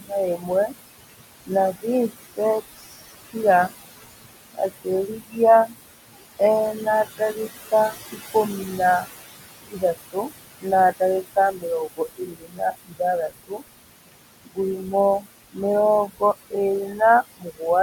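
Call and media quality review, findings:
Overdone noise removal, whole clip: background drops and breaks up into twinkly specks. Noise reduction is clearly set too hard on the room noise (about 12 dB under speech), zeroing any band near its noise estimate.

Noise suppressor artifacts, throughout: noise pulled down about 18 dB between phrases, then bobbing back up under the speech. The suppressor is gating bands frame by frame, so the residue pumps instead of sitting steady.

Speech cut by the noise suppressor: 0.0–3.36, 3.7–6.41, 6.74–15.59, 16.07–16.53, 16.87–17.01 and 17.37–17.62 s. Soft consonants and word tails get swallowed, dropping about 21–22 dB, milder (about 7 dB) at 16.87. That's roughly five seconds of speech treated as noise.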